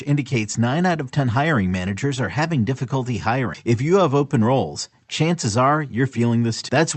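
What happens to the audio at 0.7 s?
Nothing goes wrong at 0.7 s: the speech passes through intact, with the call path's Opus coding at its band-limited top end and no dropout, glitch or distortion at that moment.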